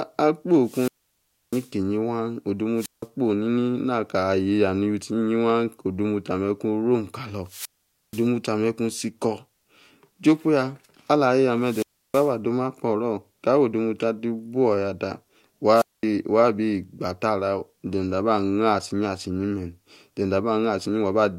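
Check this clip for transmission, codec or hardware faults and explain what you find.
The speech has five wireless microphone squelch dropouts, at 0.62–1.72 s, 2.75–3.07 s, 7.44–8.28 s, 11.59–12.35 s and 15.74–16.04 s, with silences of 0.65, 0.17, 0.48, 0.32 and 0.22 s. Each time the FM signal fades, hiss rises briefly, the receiver's squelch mutes, and the voice returns. This shows as a broadband noise smear and then a blank gap in the waveform and spectrogram.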